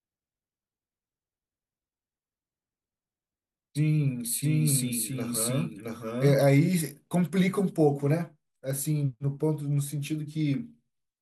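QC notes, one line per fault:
4.42–6.36 s, doubled audio track: a full-band copy trails the speech by about 0.7 s at similar level, dry and abruptly gated, likely a second out-of-step capture path.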